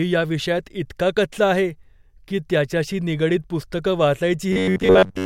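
From 4.53 s to 5.25 s, just after "की त्याच्याशी निगडीत पुस्तकं", new audio likely arrived too seldom, so playback filled the gaps by looping its last few milliseconds while the real signal was skipped. This is robotic sound from repeated short buffers. Roughly 70 percent of that stretch is repetition, and the loop forces a steady 93.8 Hz buzz, which fits a repeat length near 11 ms. The speech becomes a stiff, metallic drone that only loosely follows the words through to the end.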